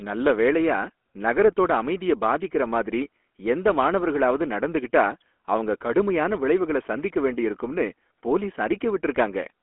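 Throughout the speech, the GSM full-rate codec is plainly audible. It rebuilds the voice from a vocal-tract model excited by sparse, regularly spaced pulses, which gives a buzzy, gravelly roughness consistent with 13 kbit/s full rate. A spectrogram shows energy roughly between 250 Hz and 3.4 kHz, and nothing above 3.8 kHz.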